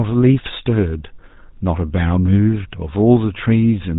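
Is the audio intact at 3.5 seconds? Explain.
No, at 3.5 seconds the speech carries GSM full-rate codec damage, as it does throughout. Nothing gets through above 4 kHz, and the sparse pulse excitation leaves it plainly buzzy and gravelly, which fits a 13 kbps stream.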